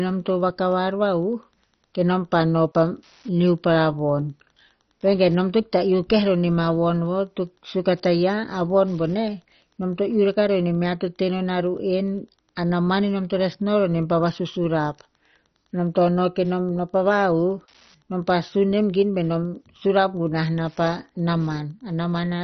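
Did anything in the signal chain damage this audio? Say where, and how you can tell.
Yes. A faint, steady ticking runs under the speech for the whole clip, about ten ticks a second and roughly 40 dB below the speech. That is Wi-Fi interference, picked up in the analogue wiring: a nearby Wi-Fi radio's beacon, repeating every 102.4 ms, is being rectified by the audio circuit.

The speech also sounds dull and gurgling, with a granular, watery distortion and nothing at all above 6.1 kHz. This is likely MP2 compression at the codec stage, heavily damaged at a bit budget that fits a very low rate such as 32 kbps. Starved of bits, the encoder switches off the upper sub-bands entirely and coarsely quantises the ones it keeps, so bands flicker in and out.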